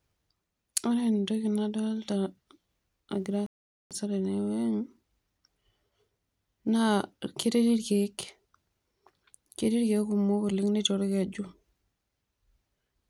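At 3.46 s the speech cuts to silence in mid-flow and stays silent for about 0.44 s, resuming at 3.91 s. This is a playback stall: the player most likely ran short of data or had its thread blocked, so output halted until it recovered.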